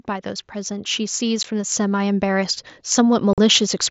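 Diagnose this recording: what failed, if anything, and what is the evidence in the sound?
At the call-processing stage, the automatic gain is rising. From 0.22 s to 3.7 s the level climbs by about 7 dB, with the speech and the background noise swelling together. On a waveform the envelope widens steadily, and on a spectrogram the noise floor brightens along with the speech.

On the headset radio link there is unconcealed Bluetooth headset packet loss in the wideband mSBC stream, which carries speech up to 8 kHz. A brief 15 ms hole falls at 1.43 s, and a longer 45 ms gap runs from 3.33 to 3.38 s, which fits two and then six lost headset frames. Each gap has abrupt edges. The waveform shows flat gaps, and the spectrogram shows blank vertical strips.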